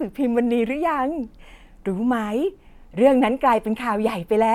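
Speech recording; no technical faults detected.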